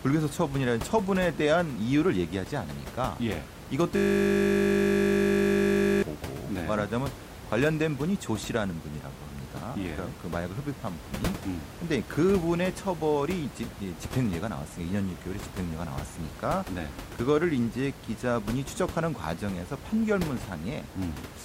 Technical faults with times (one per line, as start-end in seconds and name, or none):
3.96-6.03 system hang loop